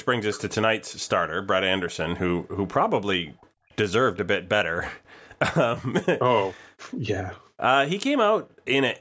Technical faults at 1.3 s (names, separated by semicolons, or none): none